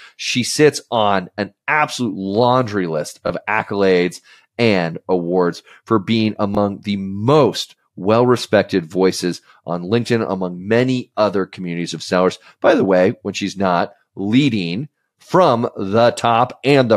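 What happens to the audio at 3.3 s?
From 3.27 to 3.30 s there is a repeated buffer. New audio arrived late, so the device replayed its last 23 ms block, which fits a 1024-sample buffer. The fragment sounds twice with a hard join, a brief stutter, and around 20 ms of audio goes missing.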